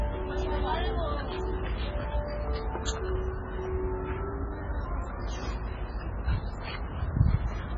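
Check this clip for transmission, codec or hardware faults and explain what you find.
There's one fault, running the whole way through: heavy MP3 compression, likely at a very low bitrate around 16 kbps. Nothing survives above 7.5 kHz, and the starved encoder drops weak detail frame to frame, so these sounds come across watery and swirly, with smeared attacks.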